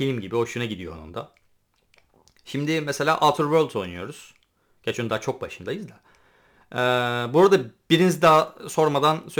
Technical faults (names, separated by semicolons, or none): crude rate conversion